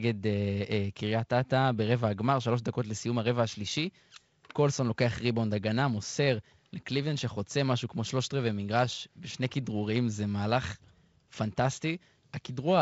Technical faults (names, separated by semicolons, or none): none